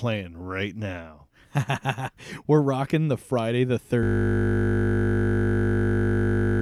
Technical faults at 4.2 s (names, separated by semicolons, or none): system hang loop